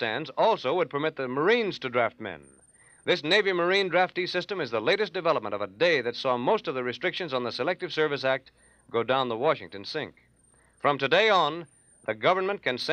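Nothing is technically wrong with this audio.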